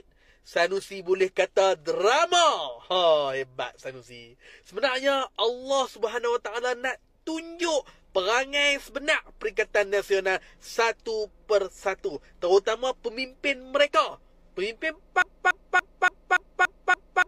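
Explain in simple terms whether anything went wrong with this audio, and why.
A broken-record loop starts at 15.22 s and runs to the end: one 0.29-second snippet repeats seven times back to back. The player or stream likely stalled and kept replaying its last piece of audio, so whatever should have followed is lost.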